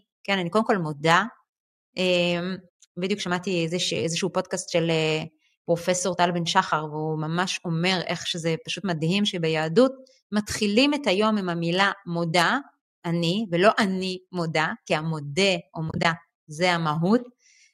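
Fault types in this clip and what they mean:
AAC frame loss with muting: Near 15.9 to 16.05 s, short soft-faded gaps break the speech, the longest about 30 ms. The decoder zeroed the lost frames.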